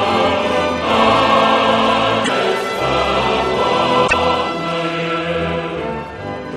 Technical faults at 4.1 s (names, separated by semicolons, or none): damaged data in a compressed stream